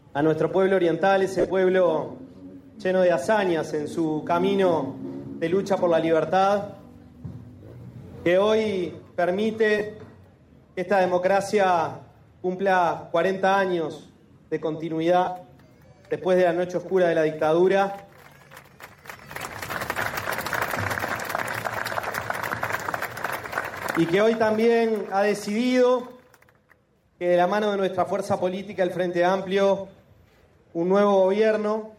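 The audio has lost LE Audio frames in three spots. At 1.39 to 1.50 s, about 75 ms goes missing across roughly 105 ms, in runs up to about 40 ms. Shorter 22.5 ms losses hit at 9.79 to 9.81 s and 15.25 to 15.28 s. The LC3 decoder refills each gap from the last spectrum with random signs. So the sound turns into a brief noisy smear, dimming in the longest run.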